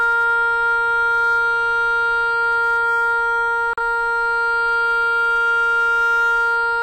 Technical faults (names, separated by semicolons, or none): USB whine; hard clipping; digital broadcast dropout